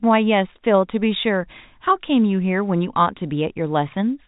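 Speech over G.711 telephone coding, with no faults heard.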